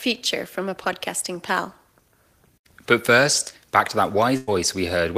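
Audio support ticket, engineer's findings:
Burst of packet loss, 4.37 to 4.49 s. Roughly 0.1 s of stream lost or arriving too late for playout. Receiver concealment holds the last sound and fades it down across the gap, then playback resumes further on with about 100 ms of speech missing. Probable component: network path and receive-side jitter buffer.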